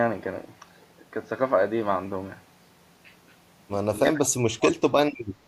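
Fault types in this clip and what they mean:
Speech suppressed in double talk: from 4.03 to 4.76 s the speech drops sharply, at its deepest by around 40 dB, over roughly three quarters of a second. The likely cause is an echo canceller that, with both ends talking at once, could not separate this talker from the returning loudspeaker echo and turned down everything it heard.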